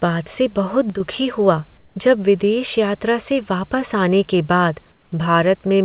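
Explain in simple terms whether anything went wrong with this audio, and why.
A couple of things do go wrong here. Around 0.90 to 1.00 s there's a brief one channel drops out moment. For about a tenth of a second the sound suddenly gets noticeably quieter, then snaps back. That's the signature of one side of a stereo pair vanishing: once the two sides are mixed to one, everything they shared drops to half strength, and anything only on the missing side is simply gone. The likely cause is a short glitch on that channel.

The second problem shows up twice, from 1.78 to 1.96 s and again from 4.92 to 5.12 s, in pauses in the speech. Each time, the real room background is swapped for a flat, smooth hiss that's a little quieter and has none of the room's natural texture. That's comfort noise in place of the background. It's likely coming from the sending side going silent when it thinks nobody's talking, with the receiving end filling the gap with made-up noise so the line doesn't sound dead. 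The swaps last about a fifth of a second each.

You'll also notice the whole thing sounds like a phone line, with nothing above about 4 kHz. That's the call codec's narrow range.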